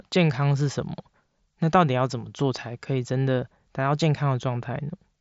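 No technical faults occur in this speech, which comes over a Bluetooth mSBC headset link with nothing above 7.7 kHz.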